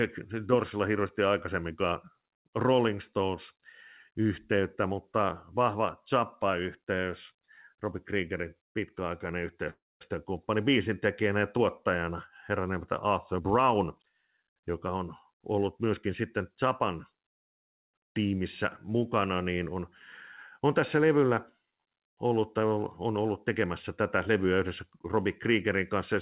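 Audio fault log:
9.70 to 10.03 s, call audio freeze: the speech halts and the last sound is carried on as a brief fading buzz or hiss, then about 230 ms of silence, before the talk resumes exactly where it stopped. The likely cause is packets held up in transit so the jitter buffer ran dry and the receiver filled the wait itself. Nothing is lost; roughly 305 ms is inserted, and everything after arrives that much later.
13.34 to 15.59 s, jitter buffer speed-up: the speech runs at about 113% of its normal rate while keeping its pitch, so it sounds rushed. With more audio queued than the buffer wanted, the receiver repeatedly cut out tiny slices one or a few pitch periods long, shedding about a third of a second over these 2.25 s to bring the delay back down. Throughout this stretch the band stays capped near 4 kHz, as the call codec leaves it.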